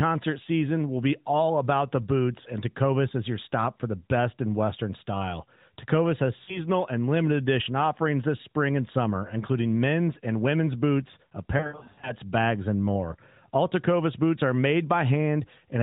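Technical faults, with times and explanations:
6.44–6.61 s, lost AMR speech frames: a short warble where the decoder repeats the last pitch and vocal tract shape at falling gain, about 40 ms of concealment, which fits two dropped 20 ms frames. Unlike a hard dropout, nothing falls to digital silence.
11.58–12.13 s, lost AMR speech frames: a rougher stretch of about 0.55 s with repeated dips and drawn-out smearing. The losses are scattered rather than one long gap, with runs no longer than about 80 ms, so each fades only partly before sound returns weak and rough. Through the narrowband, band-limited path, consistent with the 12.2 kbps mode, these sound like codec concealment rather than clicks or plain gaps.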